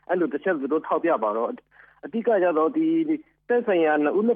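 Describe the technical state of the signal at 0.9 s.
The signal at 0.9 s is intact, with no dropout, distortion, glitch or other technical fault present at that point.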